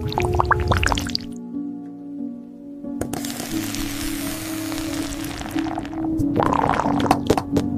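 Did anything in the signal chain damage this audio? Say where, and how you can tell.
Yes: from 3.32 s to the end, a doubled audio track, likely from a slower second capture path, adds a dry copy roughly 300 ms late, about 5 dB down.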